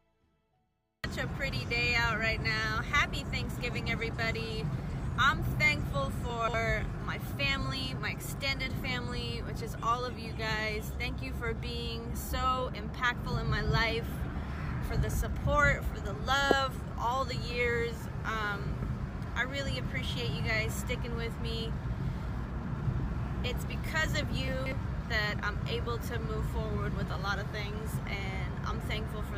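A 60 ms chunk of audio was delivered late, landing three chunks after its proper slot, so it plays out of order. Between 6.3 and 6.54 s, and again between 24.48 and 24.72 s, a quarter-second stretch is reshuffled. Nothing drops out, but the sound briefly jumbles and jumps backward, with three hard joins where the displaced chunk is spliced in.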